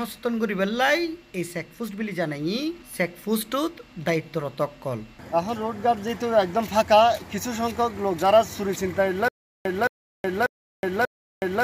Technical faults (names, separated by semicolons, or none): stutter with silent gaps